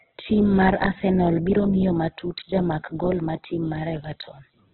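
From start to finish the speech sounds boxed-in and gritty. Nothing comes through above about 4.2 kHz, so the top end is simply gone, and what's left has a rough, grainy, noise-filled texture rather than clean tones. That's heavy damage from what is most likely Opus compression in its CELT music mode, squeezed into narrowband. The bands are being patched with folded or noisy fill, which points to a very low bitrate, around 8 kbps.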